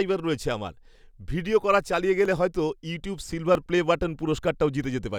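Two devices in the chain are most likely running on separate clocks that disagree by several hundred parts per million, so the buffer between them drifts until a small block of samples, on the order of a few dozen, is dropped or repeated. These clock drift buffer slips recur every 1.3 s, about four times between 0.96 s and 4.84 s, each heard as a brief click or pop in the speech at that steady interval.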